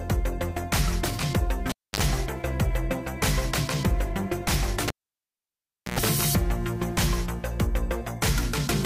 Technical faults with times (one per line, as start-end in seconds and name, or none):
1.69-2.00 cable pulled and plugged in
4.88-5.99 cable pulled and plugged in